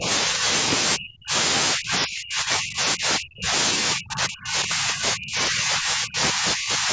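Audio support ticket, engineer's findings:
Speech suppressed in double talk: near-end talker ducks repeatedly at 0.0–0.08, 0.26–0.48, 0.96–1.34, 1.74–3.53 and 3.94–6.9 s. Early dips are light, around 10 and 5 dB. Later ones bite hard, roughly 25 to 40 dB, near cutouts. Likely the echo canceller and suppressor mistaking the talker for loudspeaker echo during overlap and clamping the whole signal. Band tops out at 8 kHz, normal for call mic processing.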